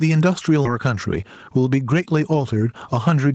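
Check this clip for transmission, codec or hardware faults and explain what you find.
Yep, three problems in this speech clip, all riding on top of a band-limited call sound that tops out around 8 kHz.

Gain pumping runs through the whole clip. The level swings by roughly 10 dB, likely from gain set too high feeding a fast limiter.

Skip ahead at 0.65 to 0.67 s: playback jumps forward with no gap filled, dropping something like 0.7 s of speech, so the two sides butt together abruptly.

Jitter buffer speed-up from 0.78 to 2.53 s: the receiver trims tiny pitch-period slices to shed backlog, about 200 ms in total, so speech runs about 12% fast and sounds hurried while the pitch stays the same.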